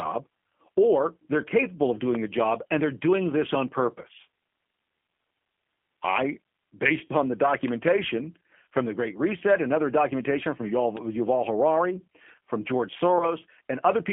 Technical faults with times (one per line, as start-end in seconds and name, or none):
0.00-14.13 G.729 codec
4.02-4.05 VoIP packet loss concealed by the speech codec
7.07-7.13 VoIP packet loss concealed by the speech codec
13.18-13.30 VoIP packet loss concealed by the speech codec